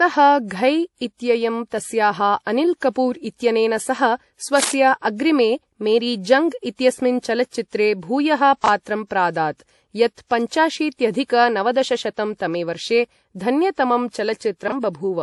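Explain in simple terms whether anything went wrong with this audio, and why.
The speech sounds dull throughout, with nothing above about 11.5 kHz. That points to transcoding between lossy codecs: the audio was likely squeezed by one compressor (MP3, it seems) and then by another (WMA), so the two sets of flaws pile up.

From 4.57 to 4.75 s, just after "अनिल् कपूर् इत्यनेन सह", a loud scratching rustle, nearly as strong as the speech, cuts across it. This is cable scratch noise, likely from a worn cable or connector being moved and briefly losing good contact.

At 8.64 s, just after "जङ्ग् इत्यस्मिन् चलच्चित्रे भूयः", and again at 14.68 s, there is a tiny jumble. These are chunks out of order: a 20-millisecond piece of sound played one slot late, swapping places with its neighbour.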